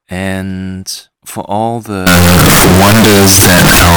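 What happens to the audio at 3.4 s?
At 3.4 s the audio is in the middle of a float read as integer fault that runs from 2.07 s to the end of the clip at 3.97 s. The 32-bit floating-point samples are likely being interpreted as 32-bit integers, so each sample's sign and exponent bits decide its value. The waveform turns almost square at an almost fixed, high level, making the speech very loud and harsh, with background noise as strong as the speech itself.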